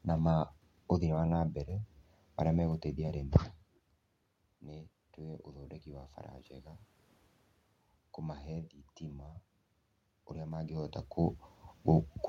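From 4.6 s to 6.79 s the speech and the room noise behind it swell together, rising by about 6 dB over roughly two seconds, so the background noise grows along with the voice. This is automatic gain rising: the input had dropped by about 16 dB, as it does when the talker moves away around 3 s, and the gain control responded by slowly turning its gain up. Because it amplifies everything at the microphone, the room noise comes up with the voice.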